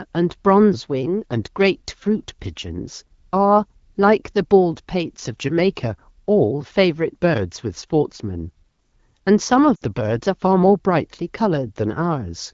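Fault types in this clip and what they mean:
Lost AMR speech frames: Radio errors corrupted a short run of frames. The wideband decoder repeated the last good pitch and vocal tract settings with falling gain. At 9.75 to 9.83 s the speech fades to near silence. The 60 ms gap fits three lost frames.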